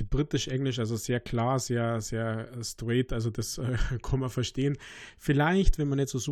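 Nothing in the speech stood out as a technical problem on listening.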